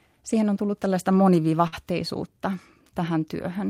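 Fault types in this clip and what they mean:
Short stall from a late packet: a packet arrived late, the jitter buffer ran dry, and the receiver stretched the last sound by 50 ms near 1.67 to 1.74 s before resuming where it left off, with nothing lost. A spectrogram shows a held, smeared band; the waveform shows repeated periods.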